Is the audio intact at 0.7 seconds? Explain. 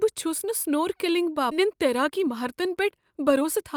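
Yes, the speech at 0.7 seconds plays through intact, with no audible fault at that moment.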